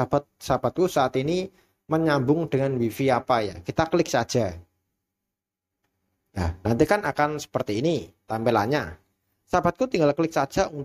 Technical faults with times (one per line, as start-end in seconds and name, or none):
none